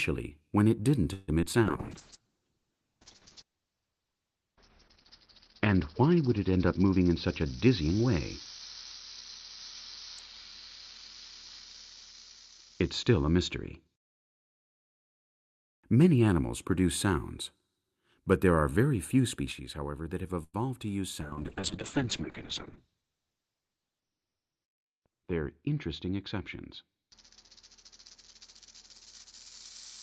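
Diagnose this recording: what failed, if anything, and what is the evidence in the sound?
At 1.13 to 1.30 s and 20.43 to 20.56 s the last sound stretches into a fading buzz, the second time falling briefly into silence. These are call audio freezes at the network and jitter-buffer stage, likely from delayed packets. Unlike packet loss, nothing is missing: 145 ms and 102 ms of delay are inserted.

Two short concealed packet losses, at 1.42 to 1.44 s and 1.52 to 1.55 s, each drop 20 ms, and the receiver patches the gap with a brief smear. The hole is too short for a buzz, and unlike a freeze, real audio is lost.

Call bitrate drops at the codec stage run from 1.65 to 15.87 s and from 21.22 s to the end. The rate falls from 40 to 7 kbps, and the bandwidth shrinks from 20 kHz to 6 kHz. The sound turns muffled and watery, with no gaps or timing change.

Jitter buffer speed-ups at 6.95 to 8.20 s (110%) and 22.80 to 23.78 s (109%) make the sound rush ahead at unchanged pitch. 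About 150 ms and 100 ms are trimmed in small pitch-period pieces, which is buffer shrinking rather than a resampling fault, since the pitch stays put.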